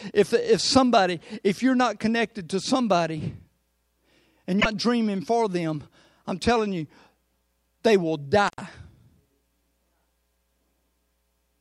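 At 4.57 to 4.66 s a short glitch cuts into the speech: damaged data in the compressed stream, where the decoder lost sync and skipped to the next frame. At 8.48 to 8.60 s the sound drops out for 80 ms with crackle at both edges, the sign of an intermittent contact briefly opening the line.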